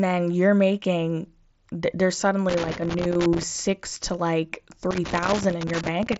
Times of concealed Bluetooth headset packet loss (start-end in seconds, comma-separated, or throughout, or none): 4.19